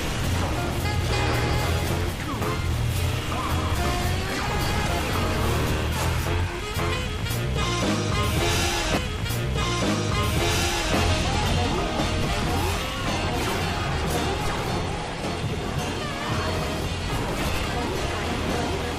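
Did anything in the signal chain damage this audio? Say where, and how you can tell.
Yes: DC steps at the converter, heard as low thumps at 12.22, 14.46 and 17.54 s. The sound carries on unbroken, unlike dropouts, while each sudden offset decays through a 5 Hz high-pass.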